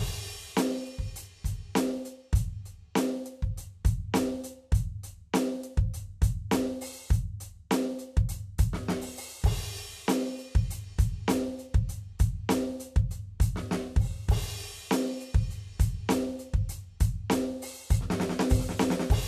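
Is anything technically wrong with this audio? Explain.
No, nothing is technically wrong with this music audio.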